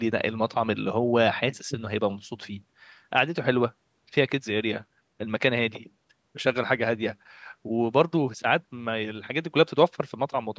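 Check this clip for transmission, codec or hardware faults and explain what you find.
No transmission, codec or hardware faults can be heard.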